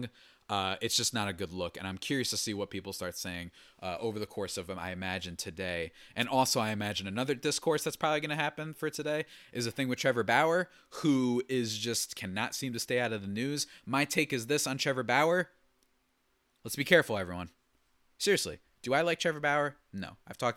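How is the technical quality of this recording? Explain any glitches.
One glitch stands out: a wireless microphone noise hit from 6.19 to 6.26 s, lasting about 65 ms. The radio link of an analogue FM wireless microphone lost signal strength for a moment, as reflected copies of the transmission arrived out of step and cancelled one another at the receiver. With less signal to lock onto, the receiver's own noise rose into the audio, so the speech is interrupted by a brief swish or burst of static before the signal recovers.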